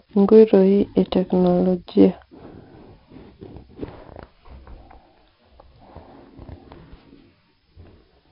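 Gritty hiss tracks every loud syllable throughout the speech, and nothing reaches above 5.4 kHz: heavy 4-bit ADPCM compression, consistent with a 44 kbps stream.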